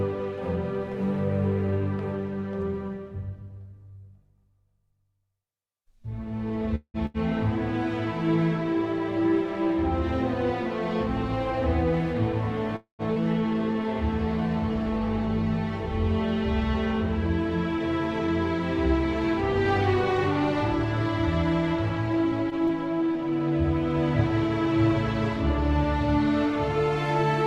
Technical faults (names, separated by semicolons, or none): call audio freeze; burst of packet loss; skip ahead; short concealed packet loss